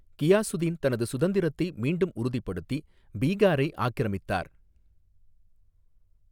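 No technical faults are audible.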